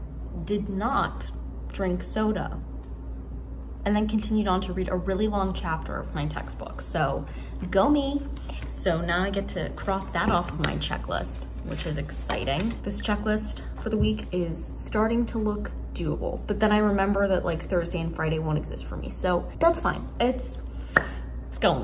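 No technical faults can be heard anywhere in this audio.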